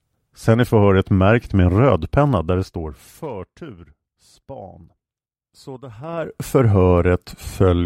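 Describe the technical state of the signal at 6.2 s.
At 6.2 s a level change of roughly 20 dB is being applied in coarse 3 dB jumps with no smoothing between them, about twenty times a second, from 5.99 to 6.36 s. This is zipper noise: each abrupt gain jump puts a small discontinuity into the speech waveform, so a rapid ticking or zipping rides on top of the speech for that span while its level moves, instead of a clean, continuous fade.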